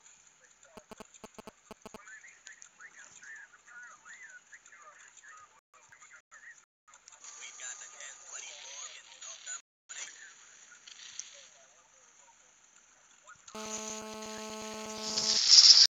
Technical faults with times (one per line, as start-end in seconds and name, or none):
0.77-1.96 GSM signalling bursts
13.55-15.37 GSM phone buzz